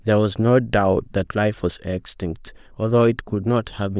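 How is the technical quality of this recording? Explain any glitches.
No technical glitches can be heard in the recording, and the signal stays intact and steady throughout.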